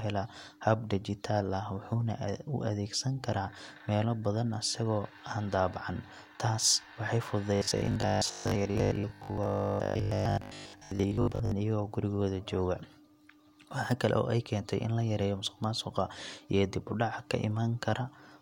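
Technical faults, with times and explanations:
7.56 to 11.52 s, robotic sound from repeated short buffers: speech turns into a rigid metallic 50 Hz buzz before "iyagoo gurigooda", likely from replaying a 20 ms buffer over most of the stretch.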